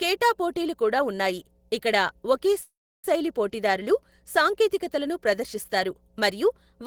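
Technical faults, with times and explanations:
Throughout: mains hum. Mains power is leaking into the signal path, which points to a ground loop or a transformer close to the equipment. The result is a steady 60 Hz tone with some low harmonics that sits under the speech for the whole clip, roughly 35 dB below it. It is faint but constant.
2.61 to 3.06 s: call audio freeze. Packets were likely held up in transit, so the jitter buffer ran dry just after "కూడా ఉన్నాయి ఇక్కడ ఒకే". The receiver covered the gap by stretching the last sound into a buzz or hiss that fades away, followed by about 320 ms of silence. When the delayed packets arrived, the speech resumed at "శైలి పోటీదారులు సాంకేతికతలను ప్రదర్శిస్తారు" with nothing lost. About 426 ms of filler had been inserted, pushing everything after it later by that amount.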